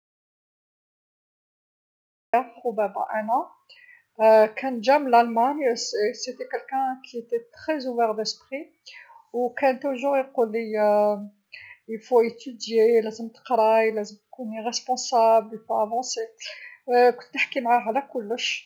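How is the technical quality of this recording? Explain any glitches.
The recording has one clear glitch, an audio dropout to silence from the start until 2.34 s. For those first 2.34 seconds there is dead silence with no room tone, most likely because the input was lost and the recorder kept writing silence. The speech then enters abruptly mid-flow, and whatever was said before that point is missing.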